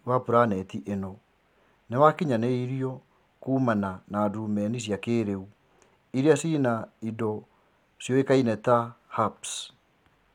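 No technical faults can be heard anywhere in it.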